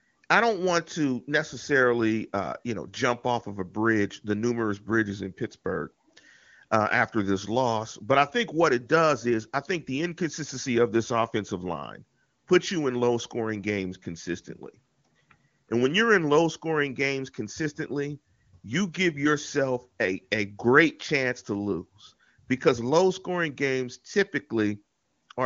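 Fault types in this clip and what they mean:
No faults can be heard anywhere in this speech.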